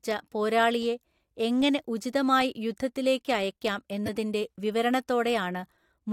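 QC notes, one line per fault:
4.06–4.09 s, corrupt frame decoded: right after "എങ്ങനെ ഉചിതമായി യുദ്ധത്തിലേക്ക് അയയ്ക്കാം", what sounds like a single damaged compressed frame was decoded anyway, its misread gains and codes placing energy at wrong frequencies, heard as a brief chirp, squeak, blip or burst of noise peaking around -20 dBFS.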